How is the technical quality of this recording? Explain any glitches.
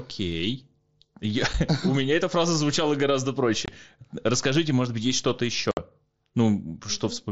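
The recording has three dropouts from unconcealed Bluetooth headset packet loss. The wideband mSBC headset link passes speech up to 8 kHz with light graininess on loud sounds.

Unconcealed Bluetooth headset packet loss: at 1.53 s, just before "у меня эта фраза", there is a 7.5 ms gap. From 3.66 to 3.68 s, right after "эта фраза звучала гораздо", there is a 22.5 ms gap. From 5.71 to 5.77 s there is a 60 ms gap. Each gap is a whole multiple of mSBC's 7.5 ms frame. This fits headset packets that never reached the phone and were replaced with silence instead of being patched over. You hear short holes with abrupt edges at all three. On a waveform, each gap is a flat stretch with sheer edges. On a spectrogram, each is a blank vertical stripe running across all frequencies.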